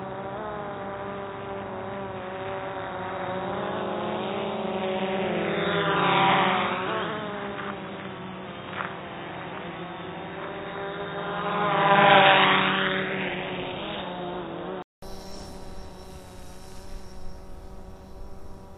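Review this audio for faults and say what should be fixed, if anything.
From 0.0 to 15.02 s the everyday sounds come across dull and boxy, with nothing above 3.8 kHz and a faint noise floor around 50 dB below them. A 200 ms gap follows, and the sound then opens up with a level shift of roughly 5 dB. This is likely an input switched to a poorer device, a narrower-band microphone with its own noise and gain, before the recording returned to the proper one. Lock the recording input to the intended microphone and turn off automatic device switching.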